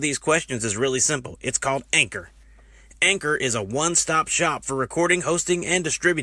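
No technical faults can be heard anywhere in the recording, and the signal stays steady and continuous throughout.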